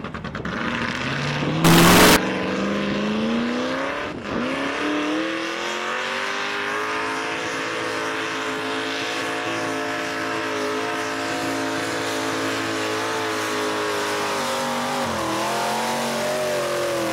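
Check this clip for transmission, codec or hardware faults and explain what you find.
One fault is present: from 1.65 to 2.16 s the sound turns into a float read as integer. The waveform goes nearly square at an almost fixed, high level, very loud and harsh, with background noise as loud as everything else. This is likely 32-bit float samples read as 32-bit integers, so the sign and exponent bits set the level. Unlike ordinary clipping, quiet passages blast just as hard, yet pitch can still be followed.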